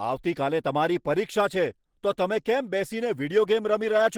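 Speech, likely passed through Opus compression in its hybrid mode at a rate that fits about 16 kbps, leaving the whole clip plainly hoarse, rough and grainy.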